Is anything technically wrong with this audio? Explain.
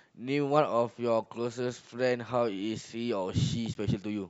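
Yes. There is damaged data in the compressed stream: corrupted bytes left the decoder misreading frames and losing sync while it hunted for the next valid frame header. In this speech clip that comes out as a brief glitch, a chirp, squawk, click or short hole, at 1.24 s and again from 3.74 to 3.77 s.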